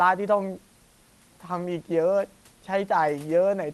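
No faults in this speech clip: the band limit near 12 kHz from the call codec and the room noise about 37 dB below the speech are normal for the path.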